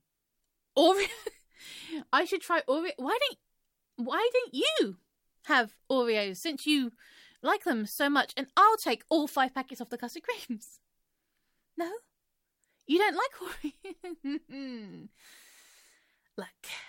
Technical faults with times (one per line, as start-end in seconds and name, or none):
none